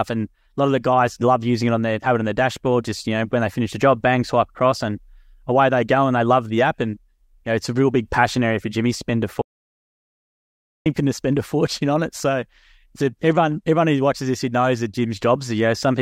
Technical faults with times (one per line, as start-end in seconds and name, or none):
9.42-10.86 audio dropout to silence